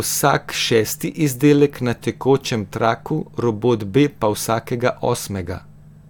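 Nothing in this speech recording stood out as a technical problem on listening.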